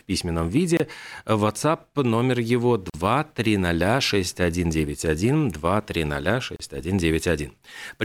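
Speech with three short dropouts, each a gap at a join of encoded pieces: 0.77 to 0.80 s (about 26 ms), 2.90 to 2.94 s (about 42 ms) and 6.56 to 6.60 s (about 34 ms). The audio was encoded in separate segments and butted together untrimmed, so each encoder's start-up delay and last-frame padding remain as silence. On a waveform each shows as a flat hole with steep, slightly smeared edges; a spectrogram shows a thin vertical blank band across all frequencies before the speech resumes where it left off.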